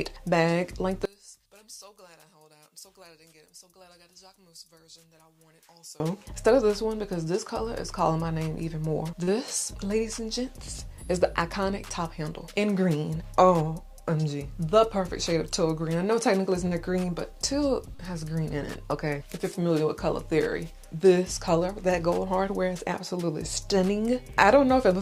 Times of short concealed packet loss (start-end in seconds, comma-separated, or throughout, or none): 9.23-9.30, 16.67-16.74, 17.95-18.02